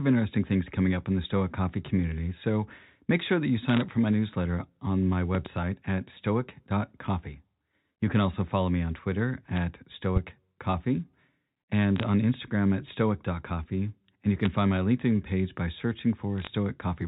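Bit errors on a digital phone line first show up at 3.69 to 3.81 s as a short burst of crackle over the speech, and again at 9.56, 11.96 to 12.03, 14.43 to 14.46 and 16.38 to 16.47 s. Flipped bits on the 64 kbps mu-law line, at a low rate of a few per thousand, corrupt single samples. Hits on sign or high bits give sharp ticks, while the narrow telephone band carries on normally.

A loud pop lands at 5.35 to 5.49 s as two quick hits, then another single one at 10.16 to 10.19 s, each about 15 dB above the speech, which keeps going underneath. The cause is likely a voltage spike from a plug, switch or static discharge.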